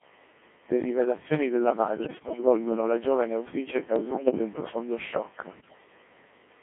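From start to finish the speech sounds robotic and buzzy, confined to roughly 200 Hz to 3.4 kHz, with heavy synthetic colouring. This is the Codec 2 vocoder, which rebuilds the voice from sine waves using only pitch, voicing, energy and envelope, at a rate that points to about 1.6 kbit/s.

From 2.04 to 2.43 s, 3.96 to 4.39 s and 5.60 to 5.78 s, the voice lurches in pitch and level and dissolves into warbles and bleeps. These are bit errors on digital voice radio: an error rate of several percent corrupts the vocoder's frame parameters, so whole frames are resynthesised wrongly.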